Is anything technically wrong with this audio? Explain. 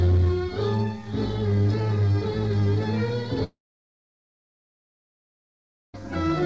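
Yes. From 3.44 s to 5.96 s there is a long network dropout: the last sound trails on as a brief fading buzz, then about 2.38 s of near-silence follows, and the audio resumes with 2.5 s missing. This likely comes from lost packets, which the receiver briefly concealed before falling silent. The G.722 call path at 64 kbps leaves nothing above 8 kHz.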